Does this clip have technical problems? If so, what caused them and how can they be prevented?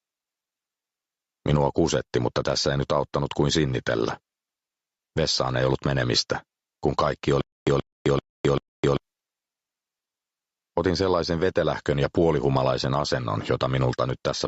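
Yes. Gain pumping runs through the whole clip. The input gain was likely set far too high for the microphone, so a fast limiter clamps down on every loud sound and then releases. The level rocks by around 10 dB, and loud and quiet passages are squashed toward the same level. To prevent it, lower the microphone gain so the limiter rarely has to act.

From 7.41 s to 8.97 s there is a stutter with silent gaps. The playback or stream stalled, most likely from the data not arriving in time, and each retry replayed the last fragment before running dry again. A 129 ms burst repeats 4 times, every 389 ms, separated by 261 ms of digital silence, and whatever should have played in that stretch is lost. To prevent it, give the player a larger buffer and a steadier network connection.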